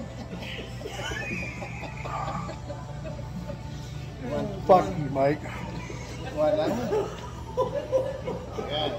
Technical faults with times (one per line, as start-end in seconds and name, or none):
4.71-4.75 hard clipping